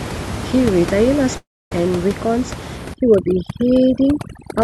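At 1.37 to 1.72 s the sound smears into a fading buzz, then about 0.27 s of silence, and resumes with roughly 0.34 s gone, likely a long network dropout rather than a brief concealed glitch. From 2.94 s to the end, overdone noise removal pulls the room noise down and breaks it into twinkling specks, unlike plain codec coarseness.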